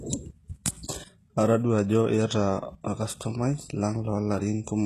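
From start to finish the speech has a gritty, metallic sheen in the treble, with s sounds coming out lispy rather than crisp, and nothing at all above 12.3 kHz. This is likely HE-AAC compression at a very low bitrate, around 16 kbps. Only the lower spectrum is coded properly. The upper band is rebuilt by copying lower content upward under a coarse envelope, so its harmonics fail to line up with the real ones and sibilants turn artificial.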